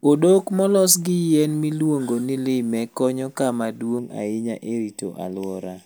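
From 3.99 s, right after "ni lime konyo kama", through to the end, there's channel delay (comb filtering). One side runs just under half a millisecond late, so the mono sum cancels at evenly spaced frequencies, the first around 1.5 kHz, and the speech turns hollow and phasey.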